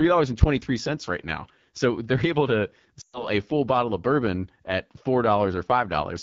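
Throughout, the speech passes through the AMR wideband (HD Voice) codec at one of its lowest modes. The rasp points to 8.85 kbit/s. With so few bits, the pulse-driven vocal tract model captures the voice below 6.4 kHz only coarsely, so the speech sounds rough and gritty. The band from 6.4 to 7 kHz is filled with shaped noise rather than real detail. The codec damage is plainly audible across the whole clip.

From 3.01 to 3.27 s, just after "so they're able to" and before "a full bottle of", lost AMR speech frames cause a dropout. Radio errors corrupted a run of frames, so the decoder kept reusing the last good pitch and vocal tract settings while lowering the gain. The gap is about 120 ms, which fits six 20 ms frames. It is heard as the voice dropping to near silence within two frames, and the voice returns briefly weak or rough.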